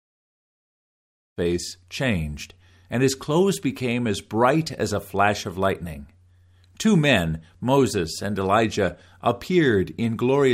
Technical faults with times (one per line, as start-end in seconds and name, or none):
none